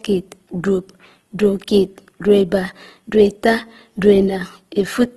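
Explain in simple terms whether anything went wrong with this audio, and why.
Opus compression, heard from start to finish: the speech sounds rough and grainy, with a plainly audible hiss woven into it, and nothing remains above about 12.1 kHz, so the crisp top end is gone. The likely cause is squeezing the audio too hard to save space. The encoder kept each frequency region's overall loudness but, lacking room for the real detail, filled some regions with noise or copies of lower ones, which turns clean sounds gritty.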